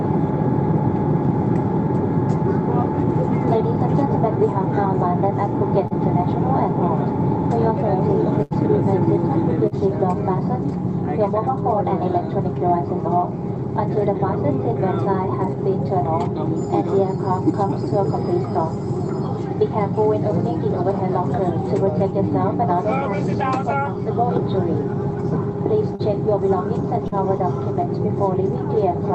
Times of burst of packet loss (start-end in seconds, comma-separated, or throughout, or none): 8.43-8.53